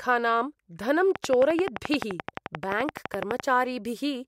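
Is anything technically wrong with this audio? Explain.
Yes. From 1.16 to 3.41 s there's a train of clicks: around thirty regular ticks, 11.6 a second, well above the speech, likely from nearby interference.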